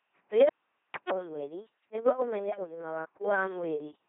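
This speech clip... no, must not start that way.

Speech runs through the LPC-10 vocoder for its whole length, coming out as a buzzing, mechanical robot voice. Each moment drives a ten-pole vocal tract filter with either a pulse train or noise. Voicing errors swap buzz and hiss, heavy damage at 2.4 kbit/s, with nothing above 3.9 kHz.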